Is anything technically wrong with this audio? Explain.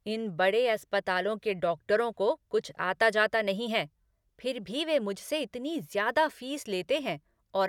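No, nothing stood out on listening to this speech recording.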